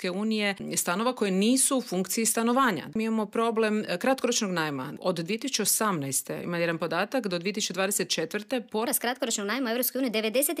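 A section at the wrong speed affects the audio from 8.87 s to the end at 10.6 s. Over that stretch everything runs 1.2 times faster than normal, and because speed and pitch are tied together, the sound also rises by about three semitones, turning higher and more hurried from one moment to the next. The likely cause is that this final portion was played back or rendered against a mismatched clock.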